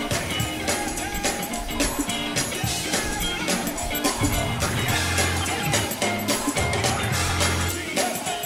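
At 5.6 s there is a small jump in the sound. No gap is heard. The likely cause is a dropped buffer (overrun): the program missed its samples before the hardware overwrote them. A few milliseconds vanished, and the two edges were spliced directly.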